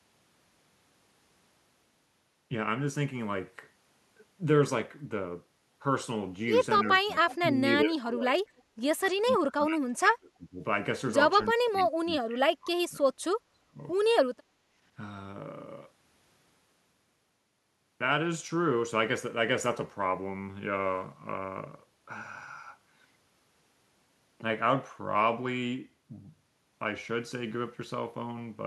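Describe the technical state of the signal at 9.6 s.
At 9.6 s the speech sits inside a stretch of speech suppressed in double talk, running from 9.12 to 10.6 s and falling as much as roughly 30 dB. The likely cause is an echo canceller failing to separate this side's talk from overlapping loudspeaker echo and ducking both together. It dips, thins or breaks up in pieces rather than cutting to clean digital silence as a dropout would.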